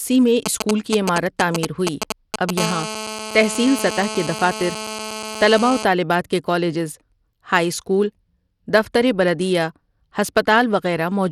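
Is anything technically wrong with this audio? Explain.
Yes. There are three faults in this speech clip.

Throughout, the sound carries plainly audible codec damage, likely from Bluetooth SBC compression. Nothing is present above 17 kHz. The treble sounds thin and unsteady, with a gritty edge riding on the speech. SBC splits the signal into a few wide frequency bands and hands out bits with no hearing model. At a low bit pool the top bands starve and the rest are coarsely quantised. The damage fits a rate near 96 kbps.

From 0.46 to 2.59 s there are GSM signalling bursts. A nearby 2G phone is exchanging short groups of radio bursts with the network, as it does before a call connects. The audio circuitry rectifies those pulses. The result is a galloping dit-dit-dit of brief 217 Hz buzzes. It is loud, only a little below the speech.

From 2.60 to 5.84 s this turns into steady GSM phone buzz. 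The call is now active, so the phone transmits continuously at 217 bursts per second. Each burst is rectified and leaks into the audio. It is a hard, raspy 217 Hz buzz with many harmonics. It has no relation to the speech. It sits about 10 dB below the speech level.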